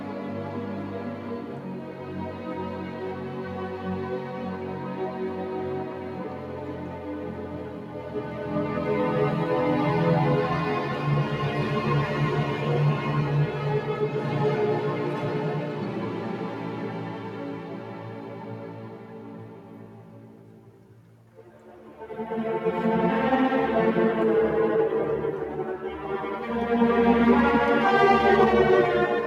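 From start to finish, a noise suppressor meant for speech is working on material it was not built for. It treats sustained tones, room ambience and reverb as noise. So it keeps pulling them down. Sharp onsets slip through, but anything held sinks soon after. The level of those held parts swings by roughly 10 dB. The result pumps and flutters, and the decaying tails sound thinned out and cut short.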